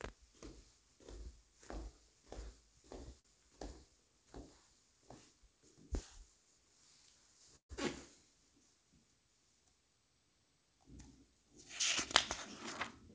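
At 3.20 to 3.26 s there is a short stall from a late packet. A packet missed its slot, so the receiver held the last sound for about 46 ms until it arrived. Nothing is lost, but that moment drags with a faint buzz or dip. On a spectrogram it shows as a brief smear of repeated texture, and the waveform shows a short repeating stretch.

From 7.56 to 7.71 s there is a call audio freeze. The sound turns into a fading buzz or hiss, then drops to silence for about 110 ms before resuming exactly where it stopped, adding roughly 134 ms of gap. Packets were likely held up in transit until the jitter buffer emptied. The waveform shows a decaying stretch and then a flat line, and the spectrogram a dark vertical band. Across both events the spectrogram is empty above 8 kHz, which fits the G.722 call codec.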